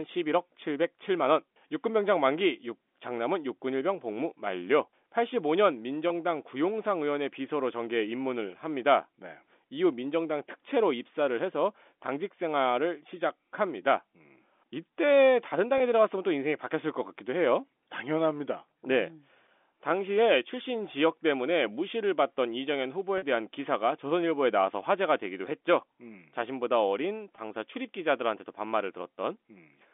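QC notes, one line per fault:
6.08 to 6.10 s, 15.78 to 15.80 s, 23.18 to 23.22 s, 27.36 to 27.38 s, packet loss with pitch repetition: brief held, buzzy patches where the receiver repeats the last pitch period to cover a 20 ms gap (40 ms at 23.18 s), consistent with one or two lost 20 ms packets on a 250 Hz to 3.5 kHz telephone line.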